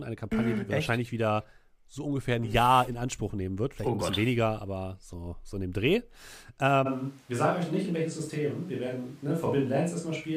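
At 6.88 s the speech abruptly turns roomy and hollow with thinner bass, staying that way to the end: a switch to a distant microphone, likely after the close one dropped out. Loudness holds steady, but a background noise floor about 30 dB below the speech appears, and the spectrogram shows smeared reverberant tails and a weakened low band.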